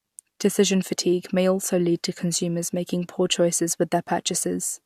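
No technical faults can be heard in this speech recording. There is nothing to place on a timeline.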